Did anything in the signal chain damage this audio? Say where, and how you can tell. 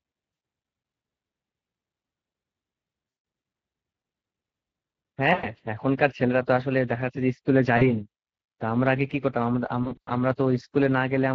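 Yes. At the codec stage, Speex coding damages the speech throughout. It sounds plainly hoarse and grainy, which fits a Speex setting of roughly 20 kbps. On a spectrogram, harmonics look smeared and noisy. The CELP excitation is too coarse to rebuild clean voicing.

At the network stage, VoIP packet loss concealed by the speech codec occurs at 0.33–0.41, 3.09–3.23, 5.33–5.49 and 7.77–7.83 s, with scattered gaps from 9.83 to 10.09 s. The waveform shows stretched, decaying stretches, and the spectrogram shows repeated frozen spectra fading out. The decoder extrapolates its last pitch and filter while lowering the gain.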